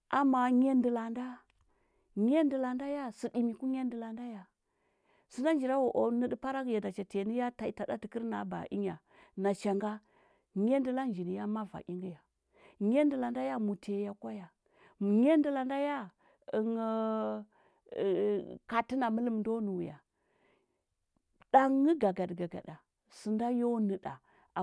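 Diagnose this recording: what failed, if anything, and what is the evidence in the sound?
Nothing failed; no faults heard.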